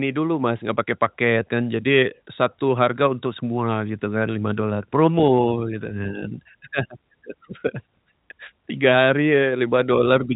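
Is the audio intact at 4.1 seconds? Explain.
Yes, the speech at 4.1 seconds is intact, with only the narrow telephone bandwidth of G.711 coding, which stops short of about 3.8 kHz.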